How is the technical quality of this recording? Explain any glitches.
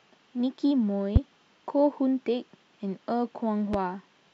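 Two loud pops break into the speech, at 1.16 to 1.19 s and again at 3.74 to 3.77 s, the first one about 15 dB above the voice and the second about 10 dB. Each is a single sharp hit with the speech running straight on underneath. That's likely a brief voltage spike, say from a switch, static or a driver glitch, getting into the signal path.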